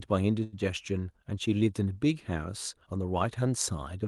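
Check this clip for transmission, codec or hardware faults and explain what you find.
One transmission fault is audible: a short stall from a late packet, from 0.43 to 0.55 s. A packet arrived late and the jitter buffer emptied, so the receiver stretched the preceding sound for about 92 ms and then resumed where it left off. Nothing is lost, but the speech briefly holds, with a slight buzzy or dipping quality. The audio above 12 kHz is absent, consistent with the call codec's bandwidth limit.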